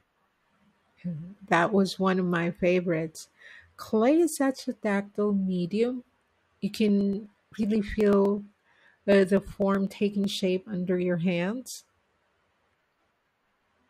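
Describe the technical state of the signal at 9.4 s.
At 9.4 s the speech is within a run of periodic USB or driver dropouts, from 6.88 to 10.24 s. Every 0.125 s, a fraction of a millisecond of audio is skipped, giving regular ticks. A spectrogram shows evenly spaced thin vertical broadband lines; the waveform shows matching small jumps.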